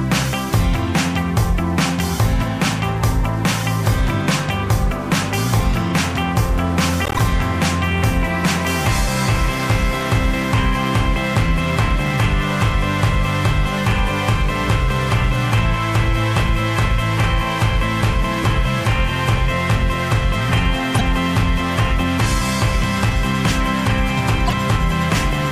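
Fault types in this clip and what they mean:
Corrupt frame decoded: damaged compressed frames were decoded and played anyway, so misread codes and gains put energy at the wrong frequencies. There are three short bursts, at 7.05 to 7.19 s, 20.95 to 21.01 s and 24.46 to 24.53 s, each heard as a chirp or noisy blip spanning a few frames and peaking around -5 dBFS. On a spectrogram each appears as a brief, sharp-edged smear of stray energy; the waveform shows a sudden high spike.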